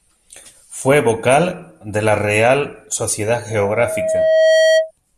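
A speech recording with loudspeaker feedback squeal. From 3.50 s to 4.91 s, a steady 639 Hz tone appears. It swells over roughly a second until it sits a little above the speech. The microphone is hearing its own loudspeaker, and the loop runs away at that frequency.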